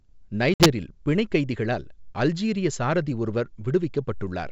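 Packet loss on an ADPCM call hits from 0.54 to 0.67 s: about three packets vanish, leaving a hard-edged silent gap, and the decoder's predictor and step size lose track of the sender's. Speech resumes at "பிணைக் கைதிகளால் அல்ஜீரிய சாரதி" with brief distortion before settling.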